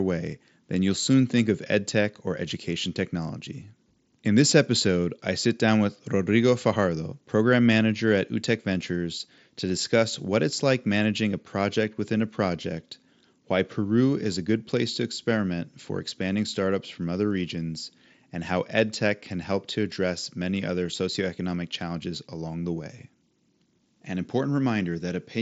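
No technical faults can be heard in this speech clip. It comes over a Bluetooth headset link using the mSBC codec at around 61 kbps, so nothing is present above about 7.7 kHz, and there is a light grainy texture from the codec.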